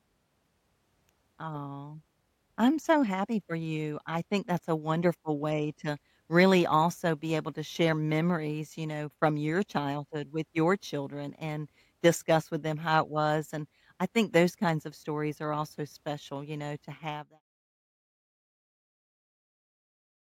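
No technical faults are audible.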